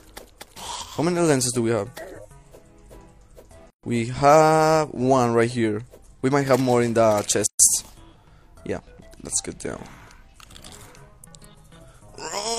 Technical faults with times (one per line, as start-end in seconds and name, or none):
3.70-3.83 gap at a join of encoded pieces
7.46-7.59 gap at a join of encoded pieces